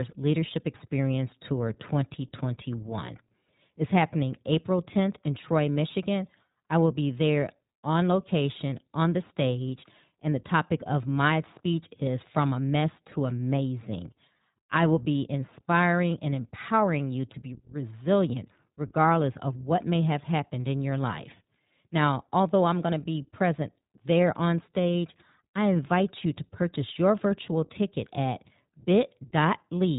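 iLBC codec damage runs throughout: speech is cut off above 3.8 kHz and coded frame by frame, giving a plainly rough, synthetic edge, consistent with 20 ms frames at 15.2 kbps.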